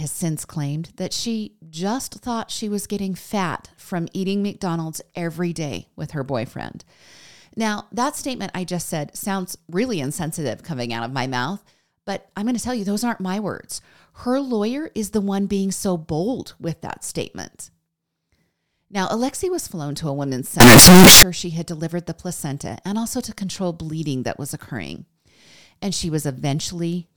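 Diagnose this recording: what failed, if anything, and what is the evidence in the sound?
The failure is at the sample-format conversion stage. From 20.60 to 21.23 s the speech turns suddenly very loud and harsh. The waveform sounds nearly square, pinned at an almost fixed, high level. Background noise rises to the level of the speech, though the pitch can still be followed. The likely cause is float read as integer: 32-bit float samples were read as 32-bit integers. The sign and exponent bits then set each sample's value, so level no longer tracks the original.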